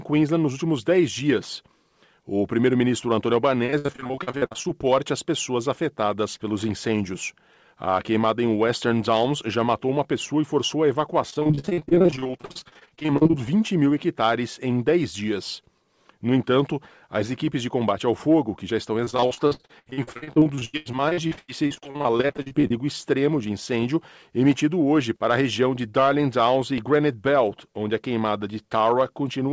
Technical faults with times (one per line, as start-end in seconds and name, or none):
3.66-4.66 repeated packet loss (robotic sound)
11.30-13.35 repeated packet loss (robotic sound)
19.05-22.72 repeated packet loss (robotic sound)